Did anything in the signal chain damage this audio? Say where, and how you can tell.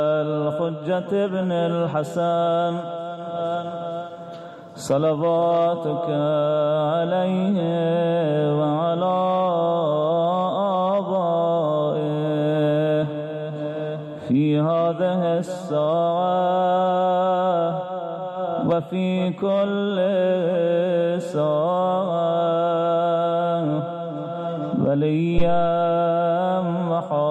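Yes, at the analogue input stage: a phantom power thump from 25.38 to 25.80 s. A supply step through the coupling capacitors gives a deep, low-frequency thud peaking at about -8 dBFS and decaying over 93 ms, unlike a click, which is brief and broadband.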